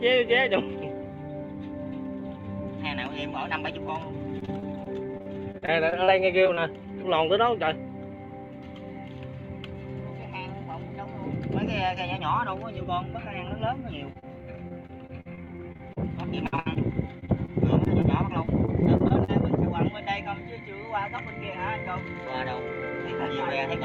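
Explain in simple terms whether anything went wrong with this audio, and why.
Yes, there are two kinds of fault. Repeated packet loss (robotic sound) occurs at 4.39–6.59 s, 14.68–15.98 s, 16.46–16.77 s, 17.19–18.06 s and 18.45–19.30 s. Chunks of sound arrived late or not at all, and each hole, up to about 60 ms long, was patched by stretching the sound before it. The rapid patching makes the sound choppy. In the 16.46–16.77 s stretch, about half of what you hear is filler.

Short concealed packet loss occurs twice in quick succession, at 14.13–14.17 s and 14.19–14.24 s. Each time, a few hundredths of a second never arrived. The receiver bridged the hole by extending the preceding sound and then blending back, which leaves a brief smear or wobble.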